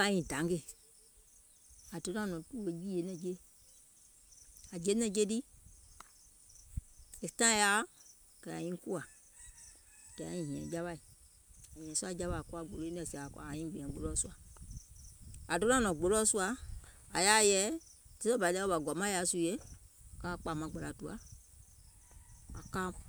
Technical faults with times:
none

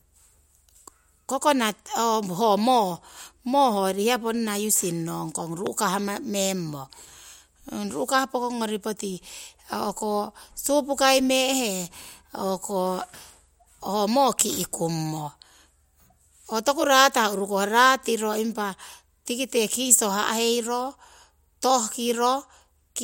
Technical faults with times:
5.67-5.69 loud pop

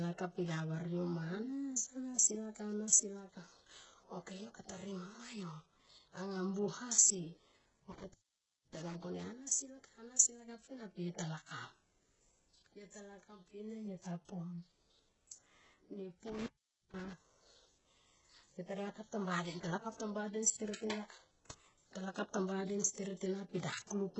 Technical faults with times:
0.00-24.20 HE-AAC compression
7.92-8.95 intermittent contact
16.27-17.13 intermittent contact

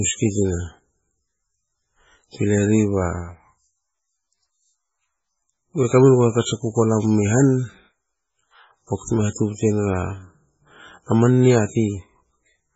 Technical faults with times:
0.00-12.76 MP3 compression

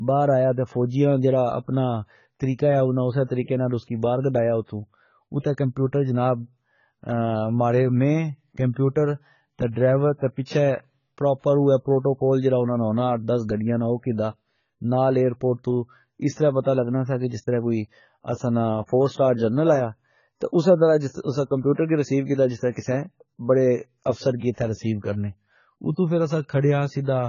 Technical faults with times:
0.00-27.28 AAC compression

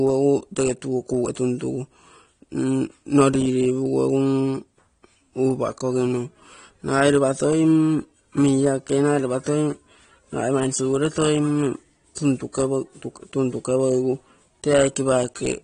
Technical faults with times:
0.00-15.64 AAC compression

